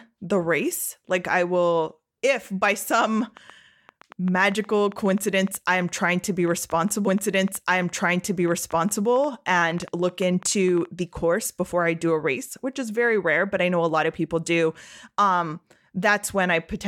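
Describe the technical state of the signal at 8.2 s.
At 8.2 s a train of clicks is running. It lasts from 3.05 s to 10.86 s, at about 6.9 clicks per second with uneven spacing, around forty in all. The pops reach roughly the level of the speech and tick through pauses too. The cause is likely interference or a faulty connection or power supply injecting pulses.

The same moment sits inside a stream segment repeated, from 7.06 s to 9.07 s. The player queued one segment twice, so about 2.0 s of speech plays again. A small blip marks the jump back.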